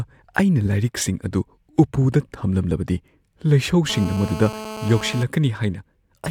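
This speech clip... no, must not start that way.

A speech recording carries GSM phone buzz from 3.90 to 5.24 s. It is a hard, raspy buzz with a dense stack of harmonics, sitting about 12 dB below the speech. Its repetition rate is 217 Hz, which is the burst rate of a 2G handset. A phone close to the recording chain was transmitting. The audio circuitry rectified its radio pulses into sound. The buzz holds steady throughout, as it does during a call. It has no relation to the speech.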